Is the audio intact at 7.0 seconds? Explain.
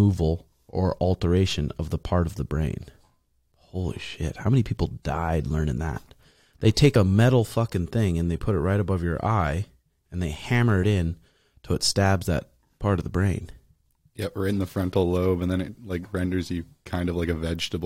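No. Compressed frames were skipped at 6.95 s, just before "a metal fucking thing": about one 23.2 ms frame never played, so the speech jumps ahead by about 20 ms.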